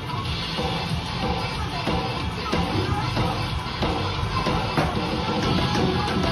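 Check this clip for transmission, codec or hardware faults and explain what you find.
I checked this clip and found no faults to explain.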